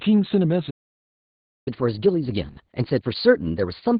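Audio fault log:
Throughout: Opus voice compression. The speech is confined to a narrow band with nothing above about 4 kHz, and it sounds muffled, hoarse and faintly robotic. This fits SILK-mode coding at around 8 kbps, where the excitation is coded coarsely. Unlike a simple low-pass filter, this also roughens the voice itself.
0.70–1.68 s: playback stall. The audio drops to silence mid-flow for about 0.96 s, then resumes where it left off, with nothing skipped. The likely cause is the player running out of data or its thread being blocked. A dropout would lose material, but this gap does not.
1.68 s to the end: catch-up at higher speed. After the stall the speech runs 1.15 times faster, with pitch raised by roughly two semitones, as the player resamples its backlog to recover lost time. Because speed and pitch rise together, this is not time-stretching, which would keep the pitch steady.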